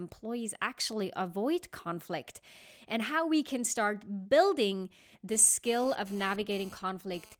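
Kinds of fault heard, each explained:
GSM phone buzz: a hard, raspy buzz at about 217 Hz, rich in harmonics and about 24 dB below the speech, starts after "we can start building" at 5.32 s and runs to 7.35 s. It comes from a nearby 2G phone's data-transfer bursts, which the audio circuitry rectifies.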